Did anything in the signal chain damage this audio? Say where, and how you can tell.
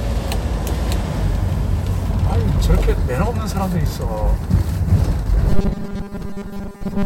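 Yes, at the driver or buffer stage. From 5.50 s to the end at 7.06 s the sound turns into a rigid, metallic 200 Hz buzz. This is robotic sound from repeated short buffers, likely caused by audio arriving too seldom while about 5 ms of it is replayed over and over, which accounts for roughly 70 percent of that stretch. Unlike dropouts or stutter, there are no silent gaps, only a buzz that follows the original roughly.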